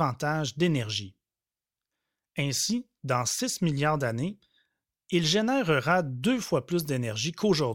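Nothing here stands out as a technical problem, so there's really nothing to flag in this bit of speech.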